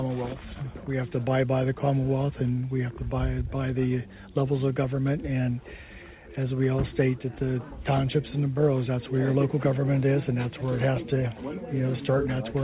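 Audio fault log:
No faults are present, and the audio carries the narrowband character of a telephone-grade call path, with nothing above 4 kHz and the usual coding noise of G.711 mu-law.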